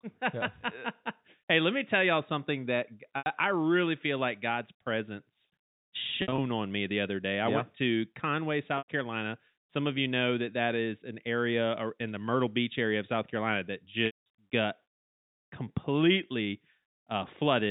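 Packet loss with pitch repetition hits at 3.18 s (after "tell y'all something that"), 6.22 s (just before "on me the other"), 8.78 s and 14.06 s. The receiver loops the last pitch cycle, so the 80 to 100 ms gaps come out as a brief buzzy hold. The 200 ms one at 14.06 s fades toward silence before the speech cross-fades back, all over the band-limited G.711 phone sound.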